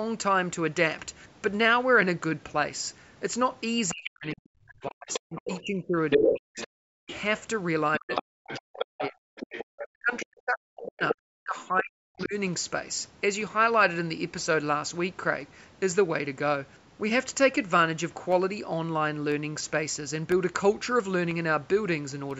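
From 3.88 to 4.10 s a second voice sits under the speech, about 10 dB below it. This is the other side's voice leaking through, likely because the far end played on a loudspeaker and the echo canceller left part of it in the microphone signal. It returns from 5.12 to 7.15 s, here about 5 dB louder than the talker. It comes back from 7.94 to 10.25 s at about 10 dB down, from 10.87 to 11.14 s at about 5 dB down, and as a faint scrap at 12.2 s, about 30 dB down. Unlike reverb, it carries a different voice, not a tail of the talker's own.

Overlapping this, the talker's speech is suppressed in double talk from 3.91 to 7.11 s, 7.98 to 9.28 s and 9.82 to 12.35 s. With both sides talking, the canceller likely could not separate the talker from the echo and ducked everything. The voice drops by as much as about 40 dB, with the affected stretches adding up to roughly two seconds, one second and two seconds. 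Unlike a network dropout, the gaps follow the leaking voice, not a fixed rhythm.

From 18.32 to 22.31 s come periodic USB or driver dropouts. About five tiny losses, each around half a millisecond of silence, occur once every second. A background task briefly blocking the audio path causes this. They sound as regular ticks, heard only under the speech. Unlike random clicks, they keep an exact one-second spacing. The call microphone processing leaves nothing above 8 kHz, as expected.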